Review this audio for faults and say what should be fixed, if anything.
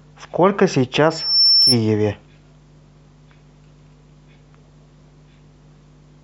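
A microphone is picking up the loudspeaker it feeds, and at 5.4 kHz the loop gain rises above one, producing loudspeaker feedback squeal from 1.10 to 1.79 s. That single frequency keeps reinforcing itself, swelling over about a third of a second into a piercing tone that ends up roughly 5 dB louder than the speech. Preventing it means reducing gain or moving the microphone off the loudspeaker's axis, with a narrow notch at 5.4 kHz.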